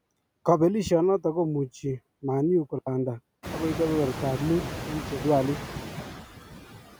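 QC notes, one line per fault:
throughout: noise suppressor artifacts. The room noise is pulled down by about 14 dB in the gaps and comes back up under each phrase, because the suppressor attenuates the bands it judges to be steady noise frame by frame, so the background pumps with the speech.
2.79–2.87 s: digital wireless dropout. The audio cuts to near silence for about 80 ms with only a very brief fade at each edge and no noise burst around it, which is the receiver muting after losing too much data on the link.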